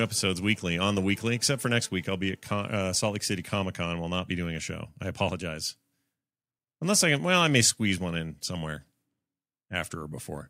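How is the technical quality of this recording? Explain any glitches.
No glitches or technical faults are audible anywhere in the speech recording.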